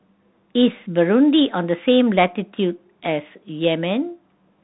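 Throughout, the speech runs through a Bluetooth CVSD headset codec, coding each sample as one up-or-down bit with an adapting step, consistent with a 64 kbps link. Nothing above 3.9 kHz survives, leaving narrow, boxy speech over granular hiss, with scratchy s sounds.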